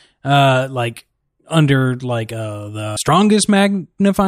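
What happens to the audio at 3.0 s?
At 2.96 s, just after "like under like uh", there is a CD skip. A knock or a surface flaw threw the laser onto another turn of the disc's spiral, so the player muted for only a few milliseconds and resumed reading from a different point. It is heard as a short tick followed by an abrupt discontinuity, with the speech continuing from a place offset by a whole number of disc revolutions.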